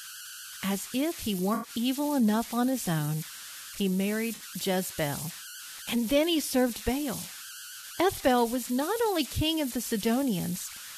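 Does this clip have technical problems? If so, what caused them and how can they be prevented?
Yes. Converter idle tones run through the whole speech clip. A whistle sits around 1.5 kHz and is clearest in the pauses. Under quiet passages it turns into a grainy hiss, about 13 dB below the signal. The cause is a delta-sigma converter working without dither. With a very small input, its output settles into repeating bit patterns. Those patterns produce steady tones, and the pitch follows the input's offset. To prevent it, enable dither in the converter or add a small amount before conversion.

There are also three corrupt frames concealed by the decoder. The first runs from 1.54 to 1.70 s, the second from 4.35 to 4.42 s, and the third from 7.81 to 7.84 s. The lengths fit roughly four, two and one damaged AAC frames. Bits in those frames were flipped. The decoder detected this and muted or smeared over them. 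To prevent it, protect the stream with error correction or a more reliable transport.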